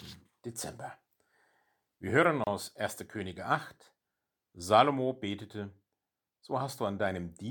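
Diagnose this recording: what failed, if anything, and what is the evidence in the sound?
The fault is at the codec stage: a gap at a join of encoded pieces. At 2.44 s the speech drops into a short silence of about 30 ms and picks up again at 2.47 s, carrying on exactly where it stopped. The edges are smeared by the codec. The recording was encoded in separate chunks and spliced without trimming, so the encoder's start-up delay and the padding on the previous chunk's last frame were both left in the join.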